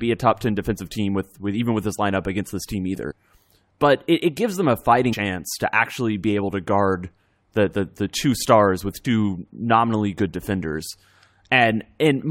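Three brief smeared blips break the speech, each with a small forward jump in the audio. The first comes at 3.10–3.12 s after "lineup against this team" and skips about 70 ms. The second, at 5.12–5.14 s between "it gives them a" and "to actually be able", drops about 150 ms. The third, at 9.05 s between "the two stars with" and "nominally good defenders", loses about 100 ms. These are compressed frames skipped: whole frames were missing or rejected by the decoder, and the jumps fit multiples of a 23.2 ms frame. Overlap between neighbouring frames softens each join into a blip, not a hard click.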